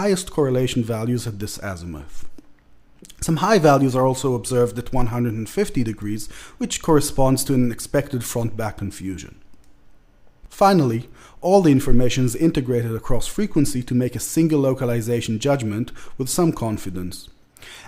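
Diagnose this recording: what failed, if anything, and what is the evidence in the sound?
Nothing in the recording points to a failure at any stage of the chain, from the analogue wiring through the converter, buffer handling and codec to playback.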